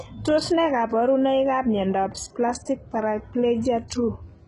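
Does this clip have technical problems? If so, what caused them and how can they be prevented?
Yes, the whole clip has heavy HE-AAC compression damage, likely from a very low bitrate, around 12 kbps. The treble is rebuilt by copying lower bands upward, so s sounds go gritty and lispy, and nothing reaches above 11.1 kHz. Encoding speech at a higher bitrate would prevent this.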